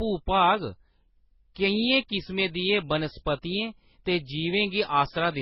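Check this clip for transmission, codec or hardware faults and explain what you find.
One codec fault runs through the whole speech clip: transcoding between lossy codecs. Nothing comes through above about 5.6 kHz, and two kinds of damage are layered together: the smeared, swirly artefacts of a very low-rate MP3 encode, which fits roughly 16 kbit/s, and then a further Opus encode that fits about 32 kbit/s. The likely cause is the second encoder spending its bits on the first one's artefacts and adding its own, while the lower MP3 cut-off stays. A single low-bitrate encode would give only one artefact character, not two mixed together.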